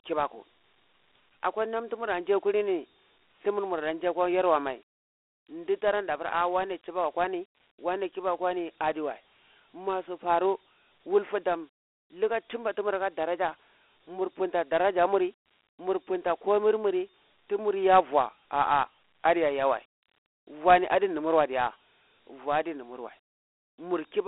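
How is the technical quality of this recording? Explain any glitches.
The technical quality is poor throughout, because of one fault: Dialogic VOX ADPCM coding. Each sample is stored as a coarse 4-bit step from the previous one, which fits a 32 kbps stream, and the speech is confined to a phone band of 300 Hz to 3.5 kHz and carries a plainly audible gritty hiss. A spectrogram shows an empty region above 3.9 kHz and a grainy noise floor that rises and falls with the speech.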